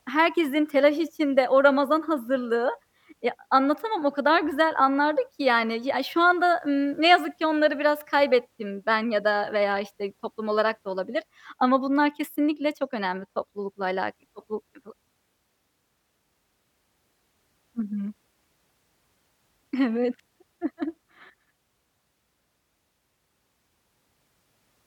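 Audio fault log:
There is no fault in this speech clip.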